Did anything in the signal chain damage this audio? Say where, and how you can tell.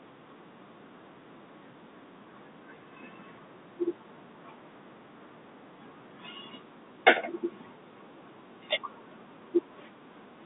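No, nothing in the chain damaged this speech; it's simply coming over a telephone line with G.711 coding, which accounts for the narrow band of roughly 150 Hz to 3.7 kHz and the absence of anything above 3.8 kHz.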